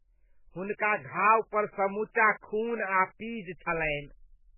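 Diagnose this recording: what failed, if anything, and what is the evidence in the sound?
The codec stage is where this went wrong, throughout the whole speech clip. There's nothing above 3 kHz, so the treble is flatly sheared off, and the heavy damage gives that watery, swirly quality with smeared consonant attacks. That's likely MP3 compression starved of bits, which fits a very low rate around 8 kbps. The encoder chops the top band and zeroes weak frequency lines, which then flicker on and off frame to frame.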